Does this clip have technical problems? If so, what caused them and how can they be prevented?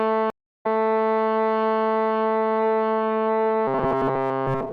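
Yes. From 0.30 to 0.66 s the sound drops out for about 0.32 s, then picks up again roughly 0.3 s further along, so a short stretch is simply missing rather than paused. This is a stream reconnect: the connection broke, the player went quiet, re-established the link and started a new decoder mid-stream, rejoining the live feed at a later point. Larger network buffering and automatic retry with resume-from-position would prevent it.

From 3.67 s to the end of the clip, the sound turns into a rigid, metallic buzz pitched at 134 Hz, with its rough outline still traceable underneath. This is robotic sound from repeated short buffers, likely caused by new audio arriving too seldom, so the software kept looping a tiny chunk, about 7.5 ms, which fits the 134 Hz buzz, while essentially all of the real audio was skipped. A larger playback buffer with proper underrun handling would prevent it.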